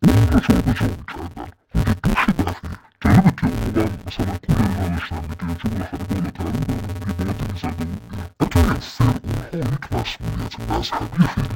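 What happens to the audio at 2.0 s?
At 2.0 s the speech carries the fault heard across the whole clip: interleaved audio read as planar. Each 5.8 ms block is split into half-speed left and right halves, giving a dull, robotic buzz at 172 Hz; a spectrogram shows 172 Hz harmonic striping.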